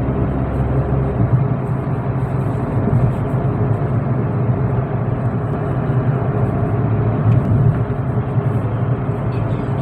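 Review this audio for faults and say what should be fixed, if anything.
A doubled audio track runs from 5.53 to 7.45 s. A full-band copy, about 5 dB quieter, trails roughly 200 ms behind, likely from a second, slower capture path or misaligned edit. On a spectrogram every event appears twice, shifted sideways with no reverb tail, and the copy starts and stops abruptly. To prevent it, feed the source through a single capture path and check edits for overlapping duplicate regions.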